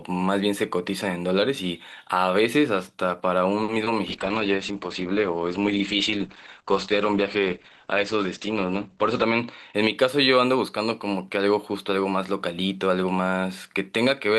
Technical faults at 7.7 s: call bitrate drop

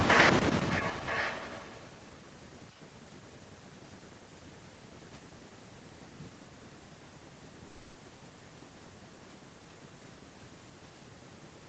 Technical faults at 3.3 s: none

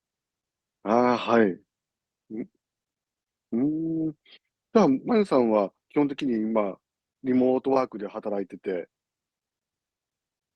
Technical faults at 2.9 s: none

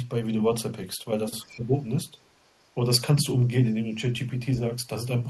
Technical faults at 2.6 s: other side's voice leaking through

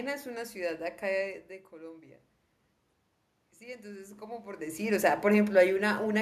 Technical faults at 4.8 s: automatic gain rising

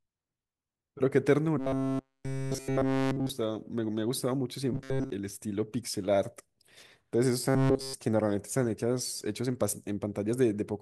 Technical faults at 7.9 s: robotic sound from repeated short buffers

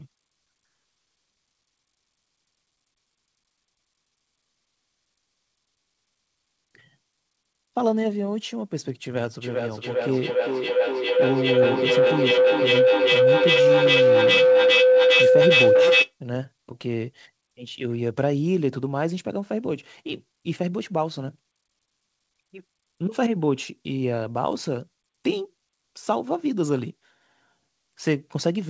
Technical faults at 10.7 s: feedback howl

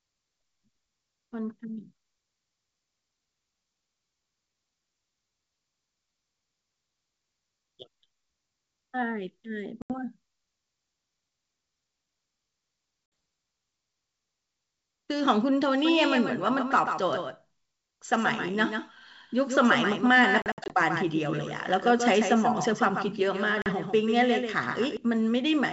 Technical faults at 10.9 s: none

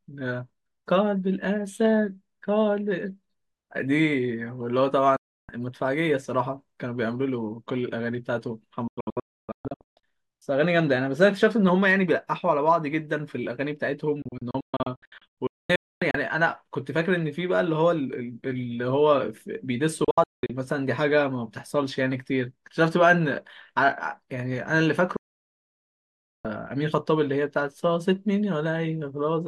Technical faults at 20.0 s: digital broadcast dropout

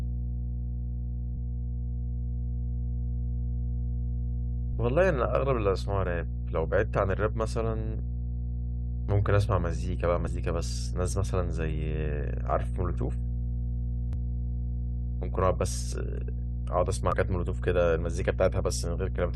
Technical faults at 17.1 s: mains hum; damaged data in a compressed stream

